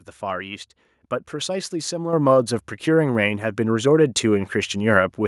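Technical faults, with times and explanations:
2.13 s, microphone volume stepped up: the call software judged the microphone too quiet and raised its input gain in a single step of about 6 dB, so the speech and the background noise jump louder together and stay there, unlike a voice simply getting louder.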